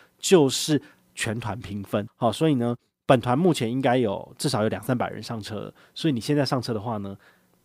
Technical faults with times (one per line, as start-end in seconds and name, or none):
none